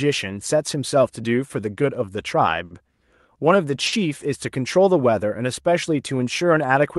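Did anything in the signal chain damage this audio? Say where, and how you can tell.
Yes. The damage happens at the network and jitter-buffer stage of a call path.

Clock drift between sender and receiver runs through the whole clip. The sender's clock runs about 5 percent slow, so the receiver's jitter buffer keeps draining. The receiver has to keep stretching the audio to stay in step. That produces an unsteady, slightly dragging tempo rather than a single obvious glitch. The paragraphs below describe the individual events it causes.

Repeated timing corrections occur from 0.04 to 2.11 s and again from 4.93 to 6.81 s. In both stretches the sound plays at about 95 percent speed. Each stretch gains roughly a tenth of a second in total, added as small repeated pieces at uneven spacing. All the corrections go the same way, lengthening the audio, which matches a sender that runs slow.

There are two short stalls from a late packet, at 2.65 to 2.73 s and at 3.87 to 3.95 s. 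Each time the buffer ran empty and the receiver held the last sound for 60 ms until the packet arrived. Playback then resumed from the same place, so nothing is lost. What you hear is a sound held slightly too long, and the playout delay grows by 60 ms each time.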